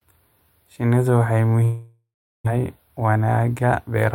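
At 1.63 s the speech gives way to a buzzy continuation of the last sound that fades out, leaving about 0.38 s of near silence before the sound resumes at 2.57 s. About 0.66 s of the original never returns. This is most likely a long network dropout, with the receiver concealing the gap and then resuming further on. Unlike a brief packet loss, the gap outlasts the concealment.

From 3.01 s to the end, the speech runs about 8% fast while its pitch stays put. This is a jitter buffer speed-up: the receiver trims short pitch-period slices again and again to shed excess buffered delay, cutting roughly a tenth of a second in total. Because the pitch does not rise, it is distinct from a resampling or playback-rate error. Only the pace sounds hurried.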